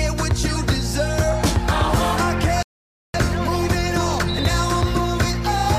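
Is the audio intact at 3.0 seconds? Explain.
No. At 3.0 seconds the sound has dropped to silence, part of a rebuffering stall from 2.63 to 3.14 s. The player ran out of downloaded audio and paused for about 0.52 s, then resumed exactly where it stopped, so nothing is lost but time is added.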